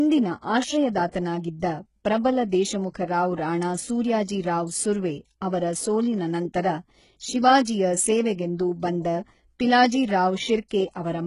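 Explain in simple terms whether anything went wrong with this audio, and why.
Two things went wrong in this speech recording. Throughout, the sound is heavily damaged by what is likely HE-AAC compression. Nothing is present above about 11.1 kHz, and the treble that remains is rebuilt from copies of lower frequencies rather than the real sound, so s sounds come out gritty, lispy or metallic.

At 1.11 to 1.14 s there is pre-echo. The codec spread its noise across a whole processing block, so about 29 ms of hiss leaks in just before a sharp attack, which then sounds smeared instead of crisp.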